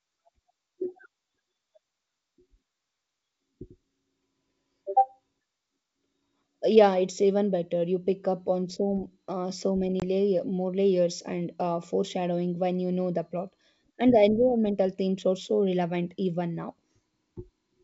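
Packet loss on an ADPCM call hits at 10.00 to 10.03 s, between "on so uh so" and "layer more layers and". About one packet, roughly 20 ms of audio, drops out and is filled with silence, leaving a hard-edged hole. Because the decoder's predictor and step size lose their match with the sender's, the speech comes back slightly off in level or with a click and brief distortion before it settles.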